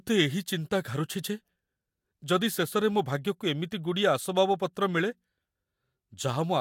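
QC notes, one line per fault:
Nothing stood out on listening to this speech recording.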